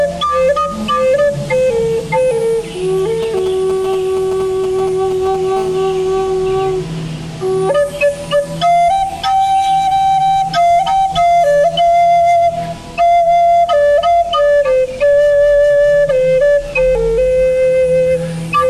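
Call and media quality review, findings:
GSM signalling bursts, 3.23–5.36 s: galloping ticks and short 217 Hz buzz groups, roughly 15 dB under signal. Nearby 2G handset rectified by audio circuit; spectrogram shows clustered vertical comb bursts.

GSM phone buzz, 5.57–6.54 s: steady raspy 217 Hz buzz, about 24 dB below signal, call-state transmission rectified. Spectrogram shows continuous harmonic comb lines; waveform shows regular pulse train.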